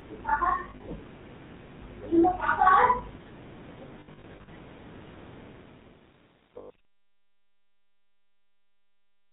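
Throughout, the speech carries the buzzy, gravelly roughness of the GSM full-rate codec, which fits a 13 kbps GSM stream. Its pulse-driven excitation coarsens the voice texture, and nothing above 4 kHz survives, so the damage is plainly audible.

From 0.64 to 0.89 s there are lost GSM frames: 140 ms of dropouts scattered over 240 ms, in runs up to about 40 ms. Each gap is filled by repeating the last good frame, which gives a brief metallic ring. A heavier burst follows from 4.00 to 4.49 s, with 300 ms lost across 480 ms and runs up to about 70 ms, so the ringing holds longer.

From 5.49 s to the end, truncation distortion rides on the fade-out that starts around 5.5 s. The level stage points to roughly 9-bit resolution with no dither, so the waveform coarsens into steps. From 5.82 s onward the tail turns gritty.

Within that stretch, at 6.58 to 6.70 s, another 120 ms of lost GSM frames adds a short rough, metallic hold.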